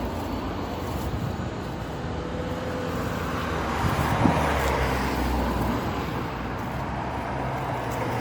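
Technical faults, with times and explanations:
Throughout, generation loss: the sound has a swirly, watery texture with a hollow, scooped quality, transients are softened and smeared, and there is no content above about 19.9 kHz. The cause is likely repeated lossy coding, with the audio decoded and re-encoded around seven times through MP3 at a rate that points to roughly 94 kbit/s. Each pass quantises again on a shifted frame grid, so noise and spectral gaps pile up.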